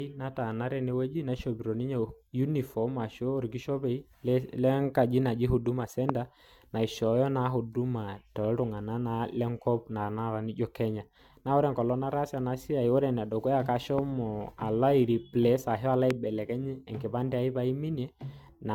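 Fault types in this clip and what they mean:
Generation loss: throughout, the speech sounds swirly and hollow with smeared attacks and nothing above 17 kHz, likely from roughly four AAC re-encodes at 96 kbit/s.
Loud pop: at 6.09, 13.99 and 16.11 s, a single sharp pop rises about 15 to 20 dB over the speech, likely a brief voltage spike.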